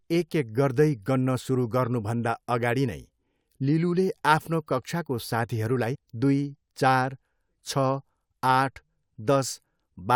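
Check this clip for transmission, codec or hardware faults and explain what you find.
One fault is present, a stream segment skipped between 5.94 and 5.96 s. The speech jumps forward abruptly, as if part of the talk has been cut out, with a brief blip at the join. The likely cause is a segment of a segmented stream that failed to load, so the player moved straight to the next one. On a waveform the join shows as a sudden step in level or shape. On a spectrogram it shows as a thin vertical line and a clean break in the speech's harmonic pattern.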